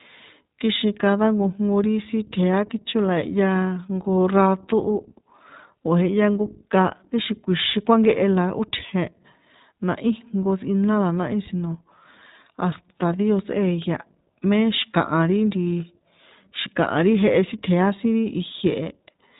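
Throughout, the speech carries iLBC codec damage: a hard spectrogram ceiling at 4 kHz, with rough, synthetic-sounding independently coded frames, fitting the 20 ms mode.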